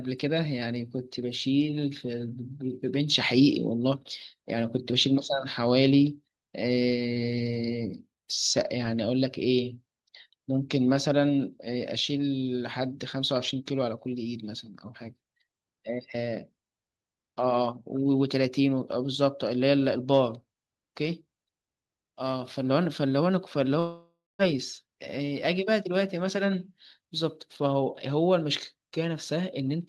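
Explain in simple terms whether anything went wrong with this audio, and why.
One fault stands out, from 23.79 to 24.42 s: a long network dropout, likely caused by the connection losing about 0.6 s of audio. The sound stretches into a fading buzz, then goes quiet for roughly the last quarter second before the speech picks up further on with that piece gone. A brief network glitch would be patched over almost seamlessly; here the patch runs out and silence shows through. The call's codec, which limits the highest frequencies to about 12 kHz, adds nothing unusual.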